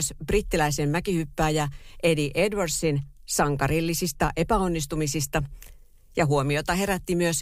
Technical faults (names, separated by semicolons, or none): clock slip clicks